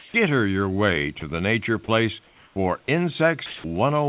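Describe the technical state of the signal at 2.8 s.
Sound dropped by the voice detector, from 2.84 to 2.88 s: the speech gives way to 40 ms of steady, hiss-like comfort noise, then resumes. The likely cause is the sender's voice detector briefly treating quiet speech as background and pausing transmission.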